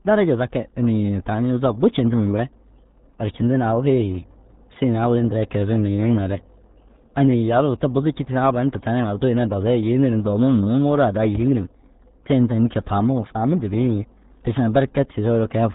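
Throughout, the speech has been squeezed through the RealAudio 14.4 codec, a dial-up-era coder whose heavy damage fits an 8 kbit/s stream. Nothing above 3.8 kHz survives, so the speech sounds muffled and boxy, with a gargling, watery texture.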